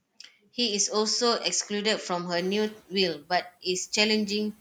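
From 2.36 to 2.71 s the noise suppressor is catching up. Around two and a half seconds the room noise jumps by about 17 dB, and for roughly 350 ms it comes through with less reduction before sinking by about 6 dB, settling about 26 dB below the speech. Unlike gate pumping, which rises and falls with every pause, this is a single swell-then-fade that follows the step in background level and does not repeat.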